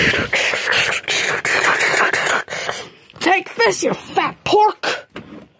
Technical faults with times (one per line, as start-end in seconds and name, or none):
0.00-5.60 gain pumping